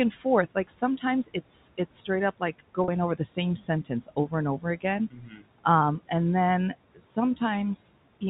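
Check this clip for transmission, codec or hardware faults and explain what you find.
Three faults are audible in this speech clip: noise suppressor artifacts throughout, speech cut by the noise suppressor twice, and one packet loss with pitch repetition. The room noise sits about 19 dB below the speech, and the G.711 A-law telephone band stays within 4 kHz.

Noise suppressor artifacts run through the whole clip. The suppressor pulls down bands it judges to be steady noise, cutting the background by about 18 dB between phrases and letting it return under speech. Unlike plain room noise, which stays level, this residue pumps with the speech and can warble.

Speech cut by the noise suppressor occurs from 0.11 to 0.25 s, dropping by up to about 11 dB over roughly a tenth of a second, and from 5.1 to 5.43 s, dropping by up to about 16 dB over roughly 0.3 s. The suppressor mistook speech energy for noise, so those parts sound swallowed or faint. 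There is no gap or repeated buzz, which separates these cuts from packet loss.

Packet loss with pitch repetition falls at 2.84 to 2.88 s, between "it's straight up like" and "over the same sentence". About 40 ms is missing, which fits two lost 20 ms packets. The receiver repeated the last pitch period to fill the gap, so it sounds like a brief held, buzzy note rather than a dip in level.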